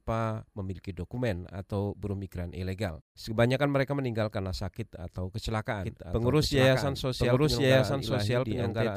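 From 5.83 s, just after "meninggal karena sakit atau", an equally loud copy trails about a second behind to the end, likely a doubled audio track.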